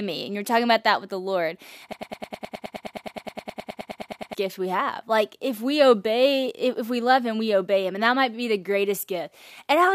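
A stall in the playback or streaming chain, most likely, left it resending the last fragment it held, producing a broken-record loop from 1.93 s to 4.35 s. A slice about 105 ms long repeats exactly, back to back, 23 times, giving a rapid mechanical stutter in the speech for over two seconds. Whatever should have played in that span is lost, and normal speech resumes with "gift we have".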